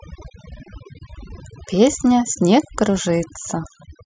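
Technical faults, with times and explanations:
Throughout, overdone noise removal: background drops and breaks up into twinkling specks, because aggressive noise reduction shut down quiet frequency bands along with the noise.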